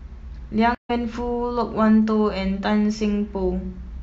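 At 0.75 s the speech drops out abruptly into about 141 ms of silence, and when sound returns at 0.91 s it picks up mid-flow with a brief fade-in, skipping ahead by roughly 150 ms so a small stretch of speech is simply missing. This is a stream reconnect: the connection broke, the player went quiet, then rejoined the live stream further along and started a fresh decoder, whose first frame fades in.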